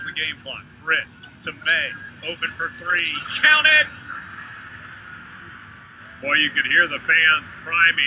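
No technical faults can be heard anywhere in this audio. Nothing in it points to a dropout, glitch or other fault along the signal path.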